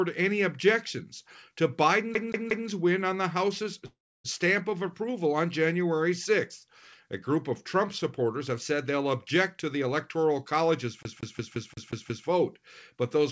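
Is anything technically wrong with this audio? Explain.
Yes. From 2.15 to 2.68 s and again from 11.03 to 12.27 s, the CD is stuck on one turn. The same 0.18 s slice replays three times and then seven times, with a brief mute at each jump. That gives an even, mechanical stutter rather than a fading hold.

From 3.86 to 4.26 s there is a call audio freeze, likely from delayed packets emptying the jitter buffer. The last sound stretches into a fading tail, followed by about 0.29 s of silence. The audio then resumes exactly where it stopped, with nothing repeated, so this is a delay rather than a skip.

Throughout the clip nothing is present above 8 kHz, which fits a wideband call codec such as G.722.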